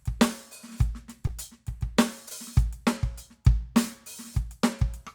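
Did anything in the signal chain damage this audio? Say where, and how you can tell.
Yes. Short concealed packet loss appears at 1.27 to 1.31 s and again at 2.29 to 2.33 s, a network-stage fault. Each time about 20 ms of the music failed to reach the decoder in time, and the receiver covered the gap by extending the preceding sound, for roughly 14 ms and 19 ms respectively, before crossfading back into the real signal. You hear it as a brief smear or wobble in the music at those moments.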